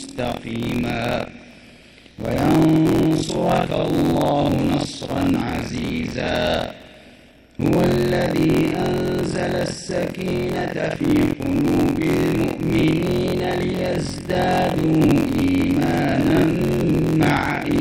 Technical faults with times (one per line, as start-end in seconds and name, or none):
0.00-17.80 buffer tearing